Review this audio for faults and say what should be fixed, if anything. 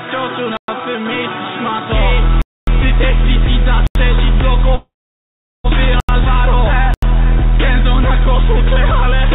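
Blocks of digital silence at 0.57 s (113 ms), 2.42 s (256 ms), and 3.87, 6.00 and 6.94 s (85 ms each). The audio cuts out and back abruptly, with no fade. The 85 ms gaps fit a 4096-sample buffer left unfilled. Prevent this by giving the audio thread enough headroom to fill every buffer on time.

Call audio freeze from 4.75 to 5.66 s. A short buzz or hiss fades into about 760 ms of silence, then the sound resumes intact, about 0.9 s late. Packets were likely held up and the jitter buffer ran dry. Prevent this with a steadier network path or a deeper adaptive jitter buffer. The whole call path is band-limited to 4 kHz, as expected for G.711.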